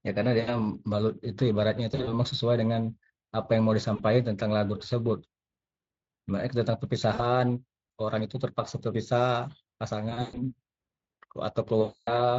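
VoIP packet loss concealed by the speech codec hits the speech at 0.39, 1.91, 3.95, 7.13, 10.09 and 11.81 s. Each time the decoder stretches its last pitch and filter into a fading buzzy tone or coloured noise, and the speech stays thin briefly afterwards. The 10.09 s and 11.81 s gaps run longest, about 260 ms at the end, over the light Speex coding.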